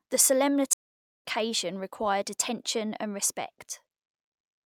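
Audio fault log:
0.73 to 1.24 s, stream reconnect: the connection dropped, leaving about 0.51 s of silence. Then a fresh decoder picks up roughly 0.4 s further along the stream, so a bit of audio is skipped before the speech comes back on "required attention and".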